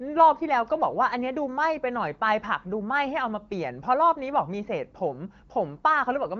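Nothing is technically wrong with this speech recording, which comes through the AMR wideband (HD Voice) codec at 15.85 kbit/s with no audible faults.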